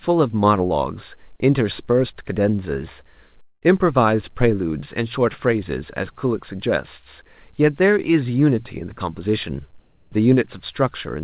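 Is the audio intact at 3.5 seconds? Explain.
No. From 3.42 to 3.64 s, a likely long network dropout leaves a fading buzz and then about 60 ms of silence, seen as a smeared band ending in a blank gap.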